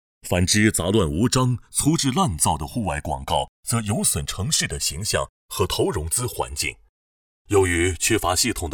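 From the start, the two channels are drifting apart. The channels run on clocks that disagree by a few hundred parts per million, so the inter-channel delay grows to around 3 ms by the end. Summed to mono, the comb notches sweep slowly, giving a gradual flanging.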